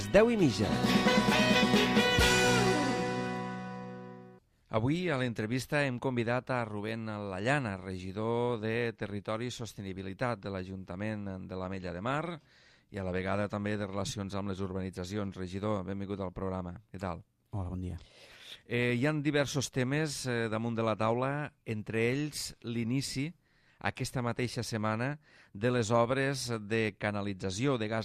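No technical faults are audible.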